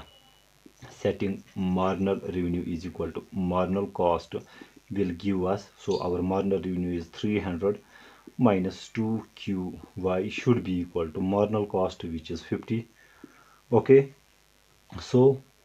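From the very start to the end there's a mains buzz riding under the sound, a steady raspy edge built on 50 Hz harmonics. Sharp switching spikes are leaking in twice per cycle, sitting roughly 35 dB below the signal throughout.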